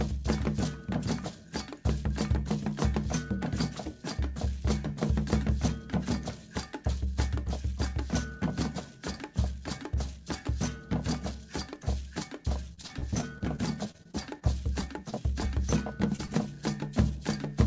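Around 12.74 to 14.43 s the audio goes choppy and a bit robotic. That's repeated packet loss: about fourteen holes, the longest roughly 37 ms, each patched by stretching the last bit of sound, so about a sixth of that stretch is filled-in audio rather than the real thing. Right after, there are four isolated short concealed packet losses at 14.81 to 14.84, 15.10 to 15.14, 16.16 to 16.20 and 16.26 to 16.30 s. Each one is a single dropped slice of about 20 ms that the receiver papered over, heard as a quick smear or wobble. The whole thing has the top cut off at 8 kHz, which points to G.722 on a call path at around 64 kbps.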